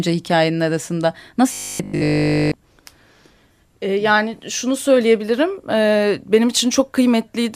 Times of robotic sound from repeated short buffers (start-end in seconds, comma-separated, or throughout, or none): 1.53-2.55